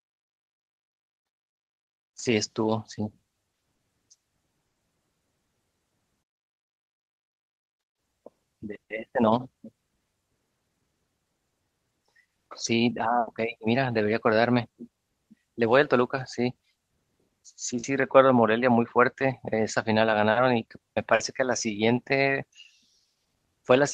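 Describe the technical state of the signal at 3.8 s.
Short concealed packet loss from 3.75 to 3.82 s: roughly 40 ms of speech arrived too late. The receiver extended the preceding sound to cover it, heard as a brief smear.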